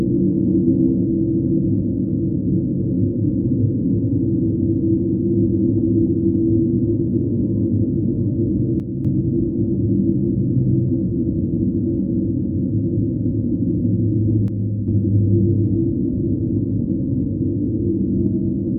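At 8.80 s the sound drops abruptly by about 6 dB and holds there until 9.05 s. The same step recurs from 14.48 to 14.88 s. Both are consistent with one channel drops out, likely a brief loss of one stereo channel. Once folded to mono, the shared content falls by half, and anything carried only in that channel vanishes. This gives a sudden dip with hard edges at both ends.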